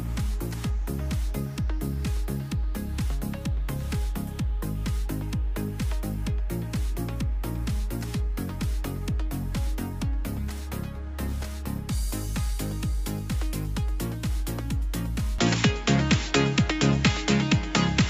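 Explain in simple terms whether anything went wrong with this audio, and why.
From 15.4 seconds to the end, the sound abruptly turns duller and narrower, losing everything above 7.6 kHz, with a slight level shift and no gap. This is an input switched to a poorer device, likely the recording jumping to another microphone or headset.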